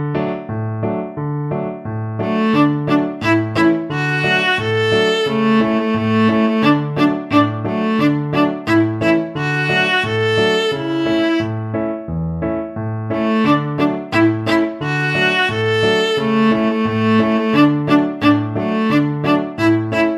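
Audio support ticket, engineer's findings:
No faults heard on listening; nothing to escalate.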